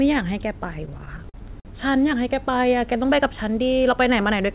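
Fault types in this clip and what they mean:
Repeated stalls (stutter), 0.86 to 1.67 s: the speech catches eight times as packets arrive late and the jitter buffer runs dry. Each time, the receiver stretches the last sound to cover the wait, about 170 ms in all, roughly a fifth of that stretch, with the longest hold 50 ms. Nothing is lost, but the speech drags and judders. It is heard through a call band that stops at 4 kHz, which fits G.711 mu-law.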